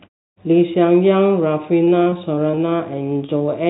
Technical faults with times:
1.84-2.70 repeated packet loss (robotic sound)
3.38-3.42 short concealed packet loss

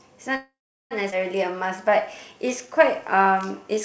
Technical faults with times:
0.36-0.93 call audio freeze
1.11-1.14 skip ahead
1.52-3.76 jitter buffer slow-down

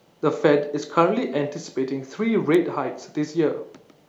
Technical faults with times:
2.55 electrical switching spike

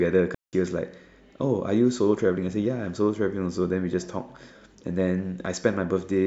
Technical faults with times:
0.35-0.53 digital wireless dropout

